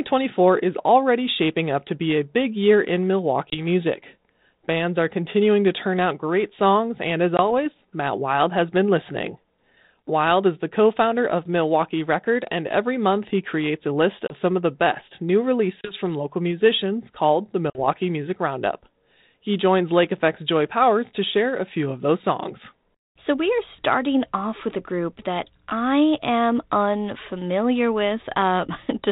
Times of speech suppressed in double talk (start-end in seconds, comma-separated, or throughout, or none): none